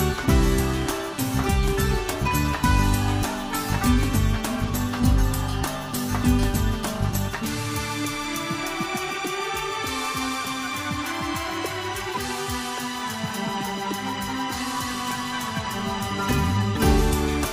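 At 12.13 to 12.18 s, 13.27 to 13.37 s and 16.75 s, compressed frames are skipped: the decoder drops whole frames, jumping roughly 70 ms ahead. Each shows in the waveform and spectrogram as a discontinuity.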